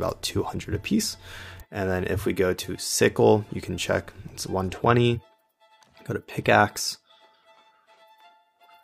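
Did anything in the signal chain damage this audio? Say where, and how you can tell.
No, nothing damaged this audio.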